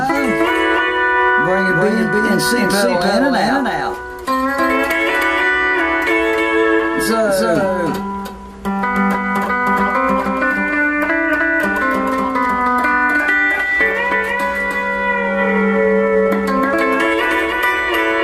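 From start to finish the sound is doubled: a second, full-band copy trails the original by about 300 ms at roughly the same loudness. This is a doubled audio track, most likely from the same signal being mixed in twice through paths with different delays. Unlike an echo or room reflection, the copy never decays and carries no reverberant colour, so every onset sounds as two equally strong, dry attacks.

Running through the whole clip as well, the upper frequencies sound dull and unstable, with a gurgling, grainy roughness on sustained sound. This is MP2 compression damage, plainly audible and likely from encoding at a low bitrate, which fits something around 80 kbps. Whole upper sub-bands drop in and out while the remaining bands are coarsely quantised. That flickering is what separates it from a plain low-pass filter, whose dullness stays steady instead of shifting moment to moment.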